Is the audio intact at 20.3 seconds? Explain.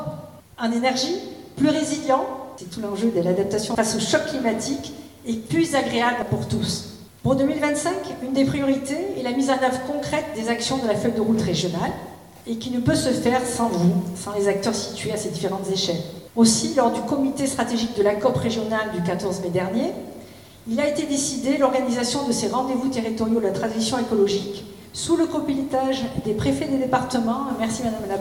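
Yes, at 20.3 seconds the audio is intact, with nothing breaking up, dropping out or distorting at that point.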